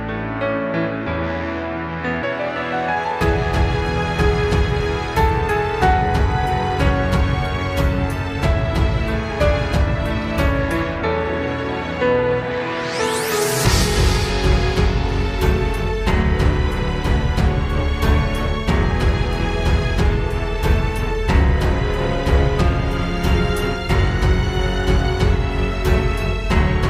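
At 2.21 s, and again from 14.26 to 14.30 s, damaged data in a compressed stream disrupts the sound. The decoder misreads corrupted frames and loses sync until the next header. Unlike a splice click, the disturbance comes from the codec's frame structure, not the waveform.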